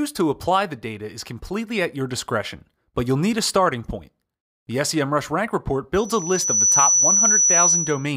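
A microphone is picking up the loudspeaker it feeds, and the loop's gain tips past one at 5.9 kHz. The result is a loudspeaker feedback squeal from 5.94 s to 8.13 s, a single piercing tone that swells over roughly 0.7 seconds until it sits about 5 dB above the rest of the sound.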